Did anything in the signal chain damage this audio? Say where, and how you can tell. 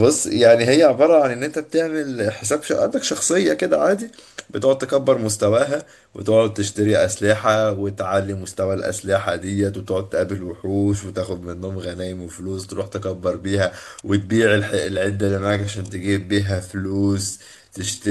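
Yes. From 14.77 s to the end, speech abruptly slows to 0.73 speed at unchanged pitch: a time-stretched section, likely software repeating short pieces.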